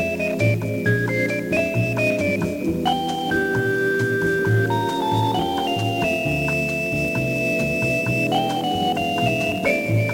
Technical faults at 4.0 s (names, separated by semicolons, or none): low bit depth with noise shaping